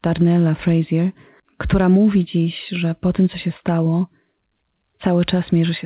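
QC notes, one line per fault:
No faults found; the speech has the narrowband sound of a working call path, with nothing above 4 kHz, which fits G.711 A-law at 64 kbps.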